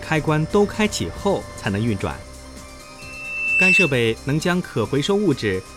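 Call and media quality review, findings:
Loudspeaker feedback squeal, 2.98 to 4.01 s: single 2.7 kHz tone swelling over roughly 0.7 s to about 10 dB above the programme. Mic re-capturing its own speaker, loop gain above unity. Spectrogram: lone bright horizontal line; waveform: growing sinusoidal envelope.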